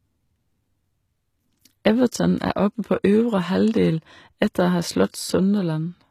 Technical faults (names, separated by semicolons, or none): HE-AAC compression; pre-echo